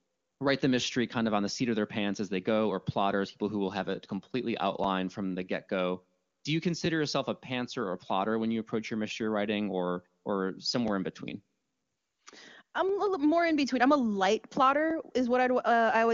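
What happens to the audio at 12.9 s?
Overlapping chunks at 12.89 s: the next 2-second chunk starts before the previous one ends, so about 13 ms of speech plays twice, heard as a brief click or stutter.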